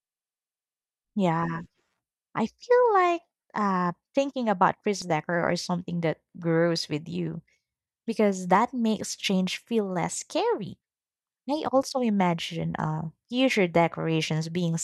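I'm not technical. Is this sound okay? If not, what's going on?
No, there's one glitch. At about 5.02 s the sound jumps ahead: roughly a fifth of a second is missing, and the audio on either side is joined with no gap, so it comes across as a skip. This is audio missing between chunks. The recorder likely handles sound in blocks of about six seconds and dropped a small piece while switching from one block to the next.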